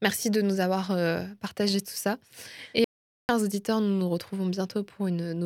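At 2.84 s the speech cuts off mid-flow into total silence. This is an audio dropout to silence, lasting about 0.45 s. No room tone remains in the gap. The input was likely lost while silence kept being written. Sound returns at 3.29 s with "auditeurs nous nous retrouvons".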